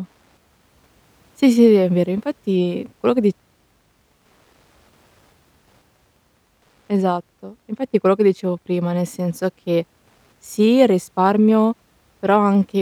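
Wi-Fi interference runs throughout this speech recording as a faint, steady ticking about ten times a second, roughly 50 dB below the speech. A nearby Wi-Fi radio's beacon, transmitted every 102.4 ms, is being rectified by the audio circuitry and reproduced as clicks.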